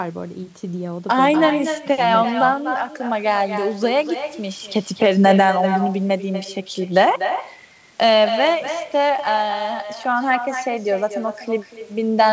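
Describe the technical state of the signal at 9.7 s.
At 9.7 s you're hearing echo with no canceller, present throughout: the far end's speaker feeds its mic, so the talker returns about a fifth of a second later, roughly 9 dB down and thin.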